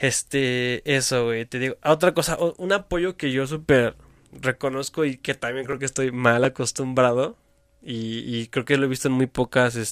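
No audible faults occur anywhere in the speech.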